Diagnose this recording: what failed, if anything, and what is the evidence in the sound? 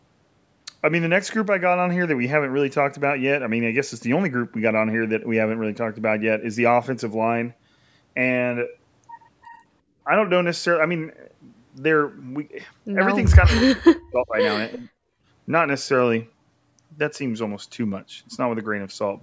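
The failure sits in call processing. From 13.47 to 14.35 s the speech sinks by about 40 dB, then dips again by about 20 dB at 14.75 to 14.89 s. This is likely speech suppressed in double talk. The echo canceller confused local speech with far-end echo and attenuated both.

The background is gated by the echo canceller from 15.17 to 15.26 s. The room sound drops by about 22 dB for roughly a tenth of a second. The canceller clamped the microphone while the loudspeaker played, then released it. The band ends at 8 kHz, as expected for the call path.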